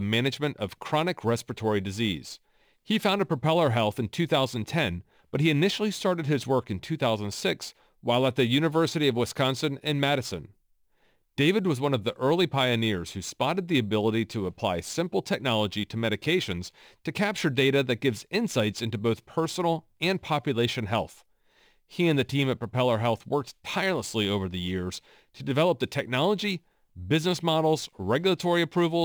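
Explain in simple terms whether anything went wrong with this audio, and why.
Something went wrong in how the speech was converted between recording speeds: a crude rate conversion dropped samples in a repeating pattern instead of smoothly recalculating them. From start to finish, that leaves a gritty fizz riding on the louder and brighter sounds.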